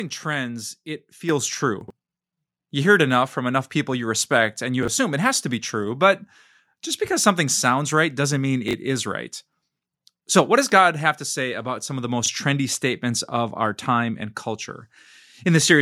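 Speech, with two kinds of fault. At 1.29 s a microphone volume step-up raises the level by about 7 dB in one jump. Voice and background noise rise together, which marks it as an input gain change rather than the talker getting louder.

Chunks play out of order at four points. The first, at 1.81 to 1.90 s, has a block arriving three blocks late. The others each have a block one block late: at 4.83 to 4.88 s, between "people you respect and" and "assume it has to"; at 8.68 to 8.73 s, between "sounds right doesn't mean" and "is right"; and at 12.24 to 12.28 s, between "about some of the" and "trendy statements of our". Each block is about 23 ms. Unlike a dropout, nothing is missing. The sound is briefly jumbled.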